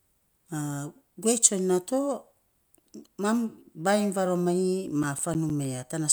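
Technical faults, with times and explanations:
4.88–5.80 s, CD scratch ticks: seven regular ticks, the longest around 10 ms. Each turn of the disc, the scratch beat error correction and the player patched or muted samples.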